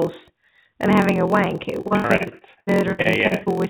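The clip is speech, carried over a call path with nothing above 4 kHz. A steady 43.1 Hz buzz runs throughout, and the speech plays at 0.938 times normal speed with its timbre unchanged. This is a block size mismatch (padded). Shorter blocks are zero-filled to fit longer reads, which fits 1024-sample reads. From 1.81 to 3.60 s the sound turns choppy and robotic. This is repeated packet loss. Many holes are patched by stretching the last sound, the longest about 65 ms, and about a third of this stretch is concealed.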